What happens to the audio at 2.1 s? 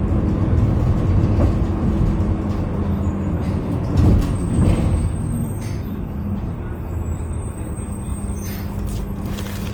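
At 2.1 s the sound is grainy and rough, with tonal parts turned noisy. This lasts through the whole clip rather than marking a single event. The likely cause is Opus compression in its CELT music mode, at a rate that fits about 24 kbps. The encoder keeps each band's energy, so there are few swirling holes, but it fills starved bands with folded or noise content. Bandwidth stays full, reaching up to 20.1 kHz.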